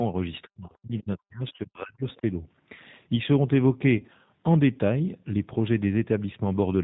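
Throughout, the speech carries plainly audible G.729 codec damage: a slightly rough, synthetic texture with nothing above 4 kHz, which fits an 8 kbit/s G.729A stream. Unlike a simple low-pass limit, it rebuilds the speech from a filter, pitch and a few pulses per frame, so the timbre sounds rebuilt rather than merely dull.

From 0.43 to 2.24 s, the speech dips and breaks into pieces, dropping by about 40 dB at its deepest and covering roughly a second and a half in all. This is likely speech suppressed in double talk, where an echo canceller turns down the near talker while the far side speaks. Unlike packet loss, it comes as gain cuts spread over seconds rather than brief synthetic tails.

Between 1.56 and 1.61 s, packet loss concealed by the speech codec fills a 30 ms gap, which fits three 10 ms frames. The decoder stretches the last pitch and filter into a buzzy tone or coloured noise that fades, and the speech stays weak just afterwards.

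From 3.98 to 4.10 s, 50 ms of loss is scattered across 100 ms, with the longest run 30 ms. The result is repeated short concealed stretches rather than one clean dropout, because the lost frames are scattered rather than consecutive.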